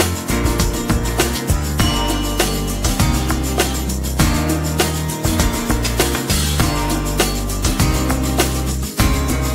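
Sample clock jitter runs through the whole recording: a timing wobble of a few microseconds adds hiss that tracks loud, bright passages, showing on a spectrogram as broadband haze that vanishes in silent gaps.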